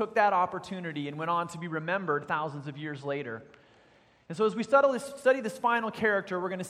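From 1.56 s to 4.88 s the audio turns thin and dull at the top, a sign of channel delay (comb filtering): one channel lags the other by a tiny fraction of a millisecond, about two samples' worth, and summing them to mono cancels highs near 10 kHz, visible on a spectrogram as a fixed dark notch band.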